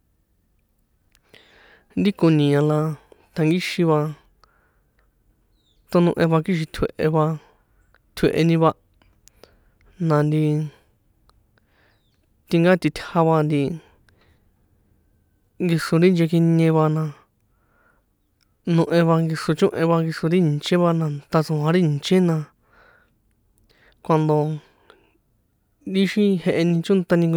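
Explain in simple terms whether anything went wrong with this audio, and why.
Nothing went wrong here, as far as the ear can tell: the speech runs along steadily the whole way, and there's no moment where the sound stumbles or breaks.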